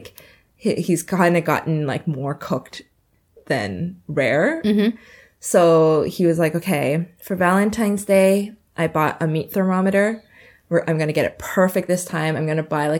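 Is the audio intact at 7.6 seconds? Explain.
Yes, the speech at 7.6 seconds plays through cleanly, with no dropout, click, distortion or other fault at that point.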